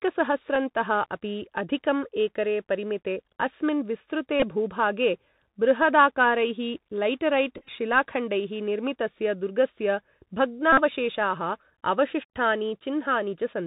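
Speech carried over a Bluetooth CVSD headset codec at 64 kbps is band-limited below 4 kHz, with scratchy sibilants, overload distortion on loud high sounds and granular hiss. Bluetooth headset packet repeats occur where lost packets are replaced by re-decoded earlier bits: a brief buzz at 0.55 s, a short buzz at 4.40 to 4.43 s, scattered short repeats of up to about 10 ms at 7.58 to 7.69 s, and a steady buzz near 267 Hz at 10.73 to 10.82 s.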